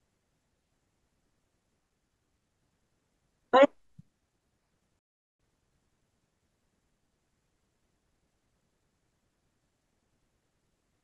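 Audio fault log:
4.99 to 5.39 s, playback stall: the speech halts mid-flow and the output falls completely silent for about 400 ms before sound returns. The likely cause is the player running short of data or its output thread being held up, so nothing reached the output until it caught up. A single clean silence of this length sets it apart from a dropout, which is usually a brief, repeated hole or a click.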